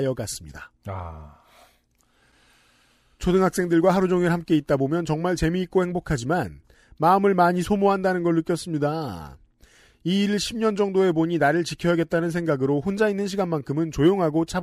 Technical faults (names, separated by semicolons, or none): none